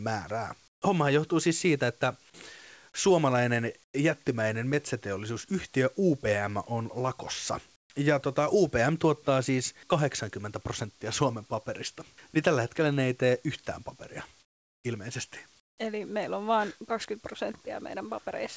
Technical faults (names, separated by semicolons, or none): comfort noise in place of the background